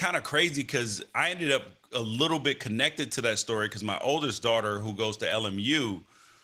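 There are no technical faults to describe in time order in this speech clip.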